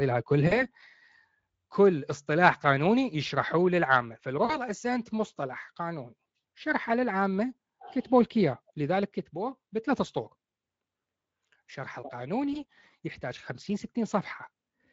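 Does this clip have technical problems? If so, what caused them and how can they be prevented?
Yes. At 0.47–0.65 s, 4.45–4.57 s and 12.53–12.64 s the speech smears into a brief buzzy tone or coloured noise that fades. This is VoIP packet loss concealed by the speech codec: the Speex decoder extrapolated across gaps of roughly 40, 40 and 20 ms. Forward error correction, redundant packets or a steadier network path would prevent it.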